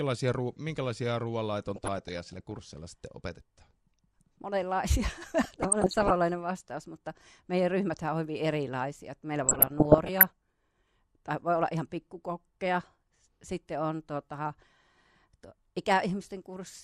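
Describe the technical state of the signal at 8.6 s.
MP2 compression is audible at 8.6 s, as it is across the whole clip, and the damage is plain. The speech sounds dull and carries a gurgling, grainy roughness, which likely comes from an MPEG Layer II encoder running short of bits. Its 32 sub-bands get too little data, so upper bands drop out and flicker while the rest are coarsely quantised. The degree of loss fits a rate of around 80 kbps.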